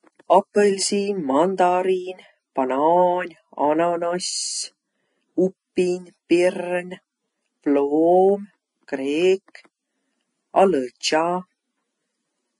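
Hissy, grainy treble runs through the whole of this speech recording, with sibilants smeared into a noisy wash, consonant onsets blurred and tones sounding roughened, and nothing at all above about 10.6 kHz. The likely cause is heavy Vorbis compression at a low setting, consistent with roughly 28 kbps: the encoder cuts off the top band and quantises the remaining upper detail so coarsely that it is replaced by noise of similar energy.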